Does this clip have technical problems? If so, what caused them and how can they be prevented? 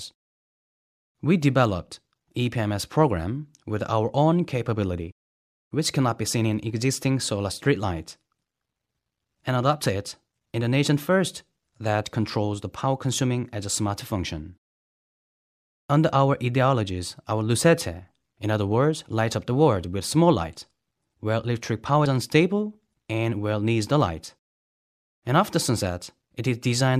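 Yes. Compressed frames are skipped at 17.58 s and 22.05 s: the decoder drops whole frames that are missing or rejected as damaged, so the audio jumps ahead, by about one frame (roughly 30 ms) at the first point and about two frames (roughly 50 ms) at the second. The 26.1 ms frame length fits an MP3-style codec at 44.1 kHz. Because neighbouring frames overlap, each join sounds like a brief smeared blip rather than a sharp click. On a spectrogram, each shows as a narrow vertical seam where the texture abruptly shifts. On the waveform, the envelope jumps discontinuously without a single-sample spike. To prevent this, verify file integrity with checksums after transfer and use error-protected storage or transport so that no frames arrive missing or corrupted.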